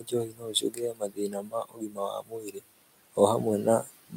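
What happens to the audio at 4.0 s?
Between 3.82 and 4.15 s the noise suppressor cuts into the speech itself. It mistakes part of the speech for background noise and turns it down with the room noise, by about 18 dB at the deepest point, over roughly 150 ms in total. That part sounds swallowed and faint. Unlike a dropout, it does not fall to silence or break abruptly.

The same moment also carries the noise suppressor artifacts that run through the whole clip. Frame by frame, bands the processor judges to be steady noise are pulled down by about 19 dB. The room noise, about 16 dB below the speech, dips in the pauses and comes back under the speech. This colouring is constant, while the cut at 4.0 s is a brief loss of the speech itself.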